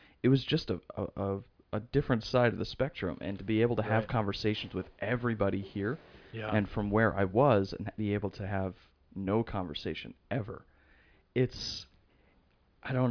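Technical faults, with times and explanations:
No technical faults can be heard anywhere in this speech recording. There is nothing here that needs a time or an explanation.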